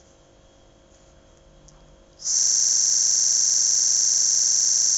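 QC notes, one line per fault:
2.39 s to end: system hang loop. The audio freezes into one 42.67 ms fragment, which fits a 2048-sample buffer, repeated about 60 times at 23.4 Hz as a rasping stutter. The waveform shows identical tiled blocks, and the spectrogram shows vertical stripes and frozen harmonics.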